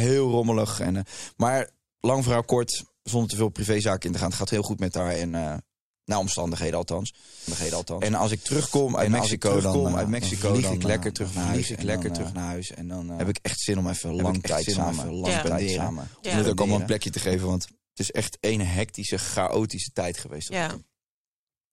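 A speech recording carries a doubled audio track from 7.48 s to 17.34 s, ending just before "want het is echt". Over that stretch a second full-band copy of the speech runs about a second behind the original and roughly 5 dB quieter, with no decay or room colour, and it cuts in and out abruptly at both ends. The likely cause is a second capture path with added latency, or an edit that left two copies out of alignment.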